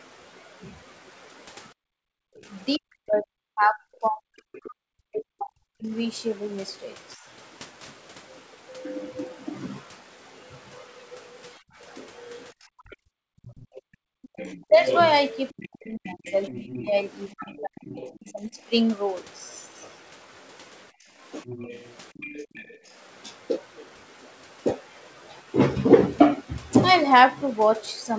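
From 1.74 to 2.47 s the room tone collapses by about 40 dB for roughly 0.7 s in total. This is background gated by the echo canceller: with the loudspeaker active, the canceller clamped the microphone path, so the ambience drops out and then snaps back when it releases.

Between 2.77 and 5.93 s the talker's level repeatedly sinks, by as much as about 40 dB, for roughly 3 s in total, with syllables thinned or missing. The likely cause is speech suppressed in double talk: with both ends active, the canceller could not tell the local voice from loudspeaker echo and attenuated everything.

From 9.01 to 18.31 s a second voice sits underneath, at about 15 dB below the talker. This is likely the other side's voice leaking through, where echo the canceller failed to remove reaches the microphone. Overlapping that stretch, from 11.6 to 18.59 s, the talker is pushed down again by up to about 30 dB for roughly 3 s overall, likely the same double-talk suppression. 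From 12.53 to 14.13 s the background is also gated out by about 40 dB for roughly 1.5 s.

From 20.92 to 22.85 s the ambience dips by about 25 dB, roughly 0.4 s altogether, as the gating returns. The far voice leaks in again from 21.46 to 22.9 s at about 20 dB below the talker, likely residual echo. A brief dip of about 10 dB from 21.63 to 21.67 s is likely one more double-talk cut. Throughout, the top end stops near 8 kHz, which fits a G.722 call path.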